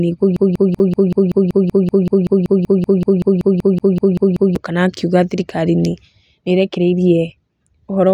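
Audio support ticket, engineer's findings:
Broken-record loop, 0.36 to 4.56 s: player, encoder or stream likely stalled and kept resending its last held fragment. A 190 ms piece of speech repeats exactly, back to back, 22 times. The speech that belonged there is lost. Normal playback resumes at "kana akiuga atĩ thirikari".

Block of digital silence, at 0.79 s and 3.79 s: output buffer not filled in time, so those samples were zeros. About 8 ms and 12 ms gaps with hard edges, each heard as a click or brief tick.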